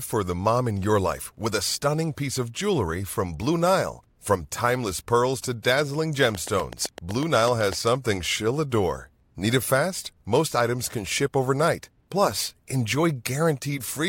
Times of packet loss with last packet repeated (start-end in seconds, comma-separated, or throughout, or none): none